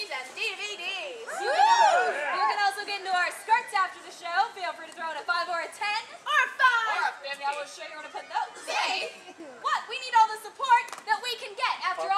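Channel delay causing comb filtering runs from 6.68 to 9.4 s. One channel lags the other by around 10 ms, and summing them to mono cancels shared content at evenly spaced frequencies, from around 50 Hz upward every 100 Hz, so the sound turns hollow and phasey.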